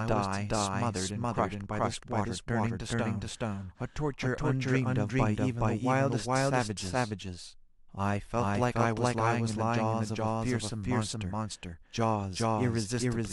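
From start to finish, the speech carries a doubled audio track: a second, equally loud copy of everything runs roughly 0.4 s behind the first. This is likely a second capture through a slower path, or two unsynchronised copies in an edit. Unlike room echo or reverb, the trailing copy keeps its full bandwidth, does not decay or repeat, and sounds no more distant than the original, so every syllable is cleanly spoken twice.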